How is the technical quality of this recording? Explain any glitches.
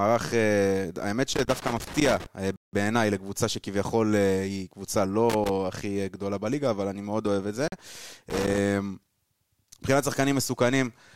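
The technical quality is let down by two recurring faults in this speech recording: bursts of connector crackle and two abrupt dropouts to silence.

Loose connector crackle occurs from 1.34 to 2.26 s, from 5.30 to 5.49 s and from 8.30 to 8.58 s. It is an irregular, scratchy sputter riding over the speech. A worn or dirty contact somewhere in the signal chain keeps making and breaking as it shifts, chopping the signal on and off many times a second. Any DC offset on the line turns each break into a small pop, which builds up the gritty texture.

A block of digital silence occurs twice: from 2.56 to 2.73 s, about 0.17 s, and from 7.68 to 7.72 s, about 43 ms. The sound cuts hard to dead silence and snaps back. The first is long enough to hear as a distinct hole, and the second as a brief gap. The program most likely failed to fill its output buffer in time, so zeros went out instead of audio. 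The lengths fit buffers of 8192 and 2048 samples.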